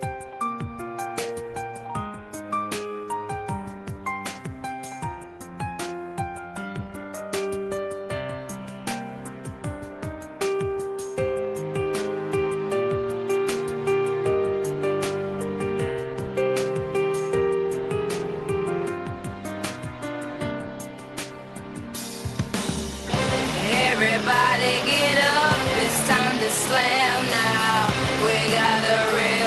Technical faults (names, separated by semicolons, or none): none